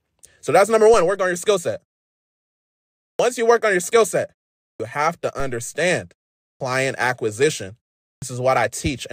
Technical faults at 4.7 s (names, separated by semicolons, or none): clipped start after a pause